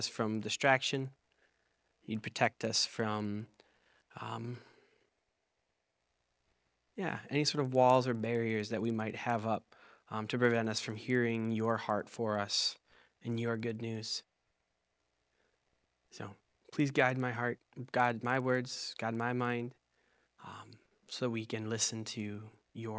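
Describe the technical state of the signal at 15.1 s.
At 15.1 s the resampler restarts on every block, as it does throughout. Each roughly 50 ms block is converted alone, perhaps 44.1 kHz down to 16 kHz. Edge errors produce ticks at 20 Hz.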